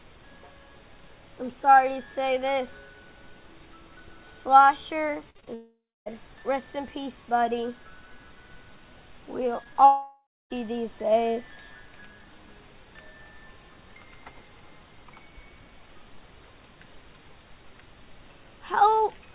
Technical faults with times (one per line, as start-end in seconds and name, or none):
5.30-5.48 repeated packet loss (robotic sound)
5.54-6.08 long network dropout
9.64-9.77 short concealed packet loss
9.85-10.52 long network dropout